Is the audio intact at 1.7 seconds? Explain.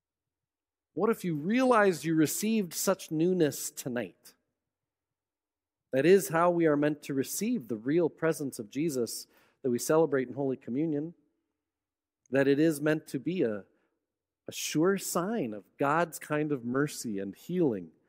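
No. From 0.95 to 2.29 s a drift correction step slows playback by about 6% and drops pitch about 106 cents, likely a clock-matching resampler adjusting its buffer, then it snaps back before "such newness tonight". A spectrogram shows harmonics shifted downward, then jumping back up.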